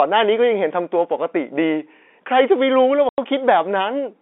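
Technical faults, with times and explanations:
3.09 to 3.18 s: packet loss filled with silence. The speech stops dead for 90 ms. Both edges are abrupt. The hole fits three lost packets of 30 ms each. Nothing was concealed. The receiver simply played silence in their place.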